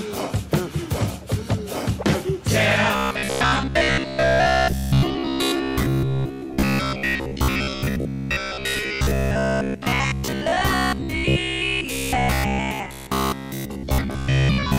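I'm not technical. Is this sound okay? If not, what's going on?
No. From about 2.96 s right to the end, the sound takes on a robotic sound from repeated short buffers: a stiff, metallic buzz near 66.8 Hz. The likely cause is new audio arriving too slowly, so a 15 ms slice keeps getting replayed for most of that stretch.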